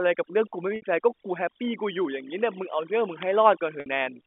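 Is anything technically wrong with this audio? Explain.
Yes, two faults are audible in this speech recording, which comes through a telephone channel carrying roughly 250 Hz to 3.5 kHz.

Overdone noise removal runs through the whole clip. The noise reduction was set too aggressively, so every frequency band that sits close to its noise estimate gets pulled far down or switched off. Quieter parts of the voice are removed along with the noise. The background drops and breaks up into small twinkling specks.

Packet loss with pitch repetition occurs twice, from 0.76 to 0.82 s and from 3.80 to 3.86 s. Each gap is 60 ms, which fits three lost 20 ms packets. The receiver fills each gap by repeating the last pitch period and fading it out over roughly 50 ms. You hear a brief buzzy, held tone that decays almost to silence before the speech returns through a short cross-fade.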